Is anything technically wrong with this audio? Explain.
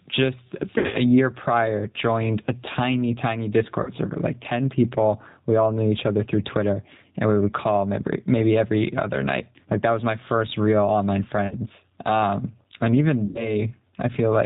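Yes, there are three problems: pumping level, a low-rate speech codec, and four dropouts.

Gain pumping runs through the whole clip. The background swells up in the pauses and sinks each time the speech gets loud, by roughly 10 dB, so loud and quiet passages sit squashed close together. The likely cause is input gain set far too hot, with a fast limiter or compressor clamping down on every loud syllable and releasing in the gaps.

The G.729 codec damage is also plainly audible throughout. The speech sounds dull, with nothing above 4 kHz, and has a rough, slightly synthetic texture, which fits the 8 kbit/s G.729A variant. The codec does not store the waveform. It sends a vocal-tract filter, a pitch estimate and a few pulses per short frame, and the decoder rebuilds speech from those, so fine detail and breath noise are lost.

VoIP packet loss concealed by the speech codec causes four breaks. 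The first is from 0.78 to 0.98 s, just before "year prior joined a". There, about 120 ms is missing in bursts spread over 160 ms, with the longest gap around 60 ms. The second is from 3.83 to 3.93 s, between "joined a tiny tiny" and "server like". The third is from 11.47 to 11.56 s, after "my first real online". The fourth is from 13.27 to 13.60 s, with about 80 ms missing. Each one sounds like a brief buzzy, smeared stretch that fades, and the speech stays weak for a moment afterwards. When packets fail to arrive, the decoder keeps repeating its last pitch and filter at falling gain. Because each frame builds on the previous one, recovery lags after the packets return.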